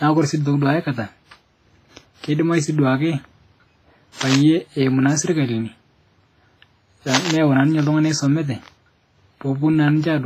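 Throughout the speech there is a ringing, washy smear with a hiss that breathes along with the voice, and nothing above 15.5 kHz. This is likely WMA compression, heavily damaged by long transform blocks and a bitrate that fits roughly 24 kbps.

From 4.21 to 4.37 s, and again from 7.13 to 7.32 s just before "neyeu naa ninche ltung'ana", dense, uneven scratching bursts sit only slightly below the speech. This cable scratch noise likely comes from a worn cable or connector being moved.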